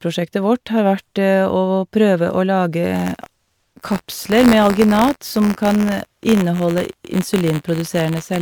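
Across the whole speech clip the sound is swirly, smeared and hollow, most likely generation loss from a few MP3 passes; the spectrogram shows scattered holes below the 20.1 kHz ceiling. From 2.95 s onward, buffer tearing adds a rattling buzz at 86.1 Hz, which fits a 512-sample buffer. A sliver of each period repeats audio from roughly 20 ms earlier, and the waveform shows hard joins at that rate.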